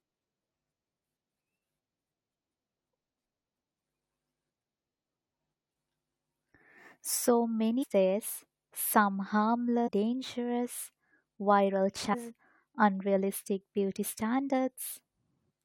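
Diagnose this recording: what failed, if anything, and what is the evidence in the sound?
Brief glitches at 7.82 s before "days some", 9.86 s before "dangerous viral", and 12.13 s after "dangerous viral": damaged data in a compressed stream, the codec decoder losing frame sync.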